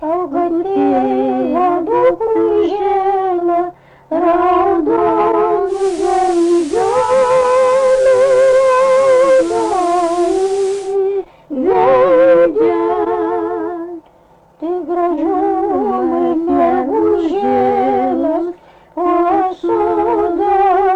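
From 5.65 to 10.98 s the receiver shows digital radio blending to analogue: it loses the digital stream and cross-fades over 219 ms to FM. Hiss rises to roughly 20 dB below the signal, and level drops about 1 dB.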